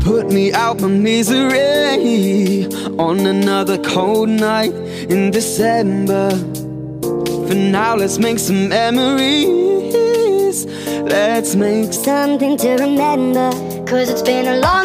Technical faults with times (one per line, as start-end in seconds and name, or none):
11.96-14.84 section at the wrong speed